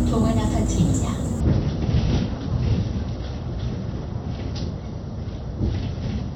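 At 1.40 s the quality drops abruptly with no gap and stays down to the end, the adaptive stream at a lower bitrate kicking in after the connection slowed. Everything above about 6 kHz is gone and codec artefacts thicken, which fits a switch to a much lower AAC bitrate.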